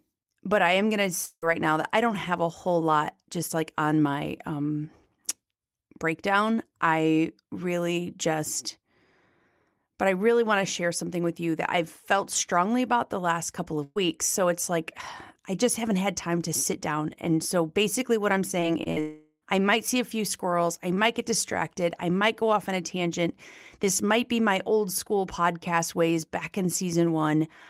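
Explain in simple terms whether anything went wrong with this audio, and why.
A long network dropout likely caused two gaps, at 1.25 to 1.44 s, between "I am going to" and "right now that I", and at 19.00 to 19.44 s, just before "I might see a". The last sound fades to silence, and the speech in between is lost.

A burst of packet loss hits at 13.84 to 13.98 s and 18.92 to 18.98 s. The sound is stretched into a fading buzz or hiss, then jumps ahead.

Short concealed packet loss causes brief smears at 18.60 to 18.64 s, right after "so basically what I'm", and at 18.84 to 18.88 s. A tiny piece of speech is patched over.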